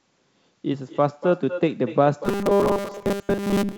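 Echo with no canceller runs through the whole of this speech recording, which was carried over a call link whose band stops at about 7 kHz. Every phrase is shadowed about a fifth of a second later by a thinner copy sitting about 13 dB down, the far end's loudspeaker leaking into its microphone and returning over the network. Robotic sound from repeated short buffers takes over from 2.25 s to the end: a rigid metallic buzz at 200 Hz that still loosely tracks the speech, most likely caused by the receiver repeating a roughly 5 ms slice of audio while skipping most of the real signal.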